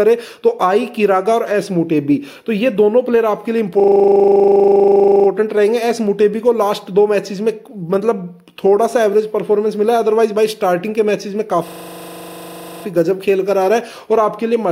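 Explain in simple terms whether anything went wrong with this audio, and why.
A system hang loop occurs from 3.8 to 5.28 s and again from 11.68 to 12.84 s. Each time, a 40 ms scrap repeats exactly, making a rattling 25 Hz buzz. Unlike a dropout, nothing goes silent.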